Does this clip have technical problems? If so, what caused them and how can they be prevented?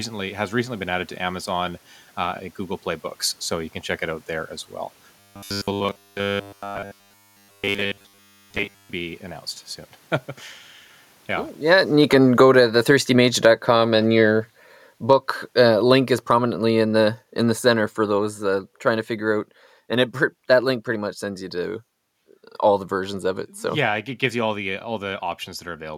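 Yes. Between 5.20 and 8.90 s, after "out there as well" and before "be announced soon", the speech turns into a rigid, metallic buzz at 100 Hz. This is robotic sound from repeated short buffers. New audio likely arrived too late, so the software kept replaying the last 10 ms fragment while the real audio was skipped. Essentially all of that stretch is repetition. A spectrogram shows evenly spaced horizontal harmonics every 100 Hz, and the waveform roughly repeats every 10 ms. Prevent this by giving the audio thread enough priority and buffer headroom that it never runs dry.

The automatic gain falls twice. From 11.57 to 12.62 s the level drops by about 11 dB, just after the talker moves at around 11.5 s. From 13.2 to 20.84 s, ending before "pretty much sends you", it sinks by about 12 dB. The gain control judged the input too loud or its background noise too strong and pulled everything down, so the room noise fades along with the voice. 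On a waveform the envelope tapers steadily, and a spectrogram darkens across all frequencies at once. Prevent this by setting a fixed input gain and disabling automatic gain control.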